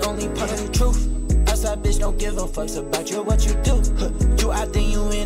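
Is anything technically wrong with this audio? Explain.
Yes. Throughout the clip a thin, fixed-pitch whine sits under the sound, a steady tone at 8 kHz with its strongest component an octave up at 16 kHz, roughly 25 dB below the programme. This is USB whine. The USB bus draws current in 125-microsecond microframes, and that regular pulsing leaks into the audio path through shared power or ground. The result is a constant tone locked to 8 kHz and its harmonics.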